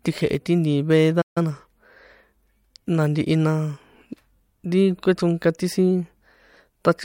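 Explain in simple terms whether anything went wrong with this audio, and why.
Two problems occur close together early in this speech clip.

At 1.21 s the sound cuts out in mid-flow and stays silent until 1.38 s, a gap of about 0.14 s. This is a playback stall: the player stopped delivering audio for that moment, most likely because it ran short of incoming data or its processing was briefly held up. When sound returns, it carries on.

Straight after the stall, from 1.38 s to 1.52 s, the speech runs at twice its normal speed while keeping its normal pitch. This is time-compressed catch-up. Having fallen behind, the player clears the backlog by trimming out tiny slices of audio and blending the joins together. The result sounds rushed for that short stretch.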